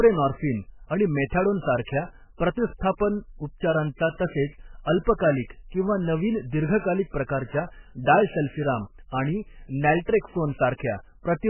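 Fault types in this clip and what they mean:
MP3 compression: likely a very low bitrate MP3 encode, heavily damaged, with nothing above 3 kHz, giving muffled, watery, swirling speech throughout.
Pre-echo: quantisation noise smeared about 26 ms ahead of an attack at 5.2 s, a brief hiss just before "किंवा नवीन दीर्घकालिक".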